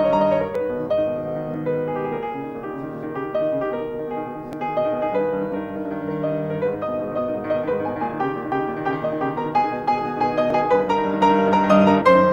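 Overlap between stream segments causes tiny skips at 0.55, 1.54, 4.53, 5.52, 8.52 and 10.50 s. Overlapping one-second segments get trimmed, so a few milliseconds vanish and the waveform jumps.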